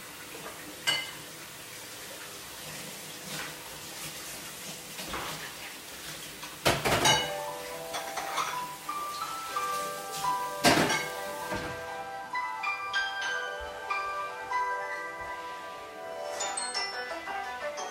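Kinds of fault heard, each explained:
Bit error spike: a single flipped bit knocks one sample way off and back, so you get one sharp broadband tick at 11.10 s, peaking around -19 dBFS.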